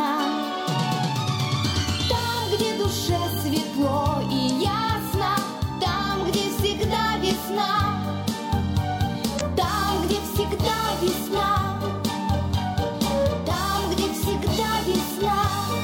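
Damaged data in a compressed stream appears twice in this audio, at 4.46 to 4.50 s and again at 9.37 to 9.41 s. Each time, corrupted bytes make the decoder misread frames and lose sync while it hunts for the next frame header, leaving a brief glitch.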